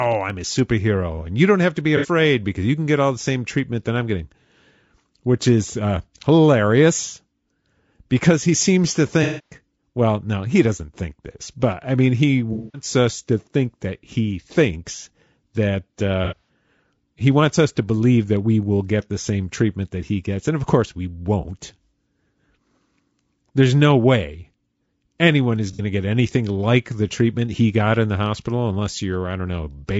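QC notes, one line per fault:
Throughout: low-delay AAC compression. The speech is rough and grainy, with noise filling the gaps between harmonics and a thin, synthetic-sounding top end. That is likely AAC-ELD at a low rate, around 32 kbps, where short frames can't hold pitch detail well.
1.97–2.08 s, 9.23–9.56 s, 12.53–12.85 s, 16.25–16.49 s, 25.73–25.81 s: AAC frame loss with concealment. The decoder fills each gap by reusing the last good spectrum. The short ones at 1.97 and 25.73 s lose about 60 ms and come out as brief smeared, phasey blips. The 210 ms gaps at 9.23 and 12.53 s sag and fade before recovering. At 16.25 s the loss is broken up over about 240 ms, the longest stretch around a tenth of a second, so it sounds more like a noisy patch.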